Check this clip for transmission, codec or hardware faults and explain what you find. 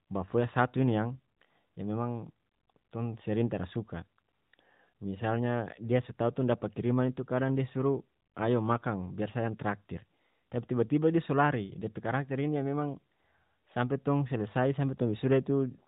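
No faults can be heard anywhere in this recording.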